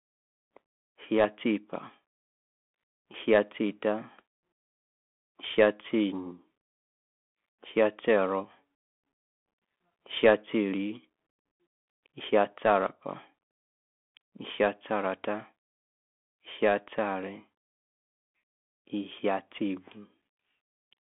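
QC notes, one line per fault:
Throughout, Bluetooth CVSD headset codec: the speech sits in a narrow 200 Hz to 3.4 kHz band with nothing above 3.7 kHz. One-bit up/down coding, which fits a 64 kbps stream, leaves plainly audible granular hiss, scratchy s sounds and distortion where loud highs outrun the adaptive step.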